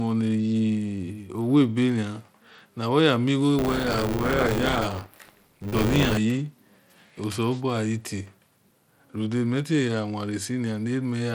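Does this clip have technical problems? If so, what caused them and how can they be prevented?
Yes. The speech was likely squeezed through Bluetooth SBC compression at a low bit pool, which fits roughly 96 kbps. Throughout, it sounds plainly gritty. Prevent it with a higher bit pool or a better codec.

From 3.58 to 6.18 s, buffer tearing occurs. Writer and reader crossed inside each buffer, splicing in about a fifth of stale audio, roughly 20 ms old, and this produces a 100 Hz robotic buzz. Prevent it with larger buffers and proper pointer synchronisation.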